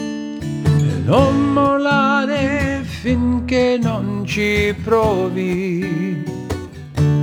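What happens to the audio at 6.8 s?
At 6.8 s the audio is inside a stretch of crude rate conversion running from 3.82 s to the end. Samples are picked by nearest-neighbour with no filtering, a pattern that points to 48 kHz converted to 44.1 kHz. This leaves an inharmonic, gritty fizz roughly 30 dB below the signal, tracking loud and high content.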